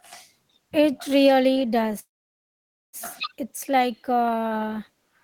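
Call audio freeze from 1.99 to 2.96 s in this speech clip: the sound stops and the last fragment trails off briefly before nearly 0.9 s of silence, and then the speech resumes exactly where it broke off. This is likely a network stall in which packets were delayed and the jitter buffer ran dry, so the receiver padded about 0.94 s of filler. Nothing is lost, but everything after that point arrives about 0.94 s later.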